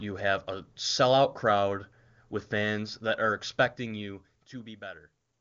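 No technical faults can be heard anywhere in the recording.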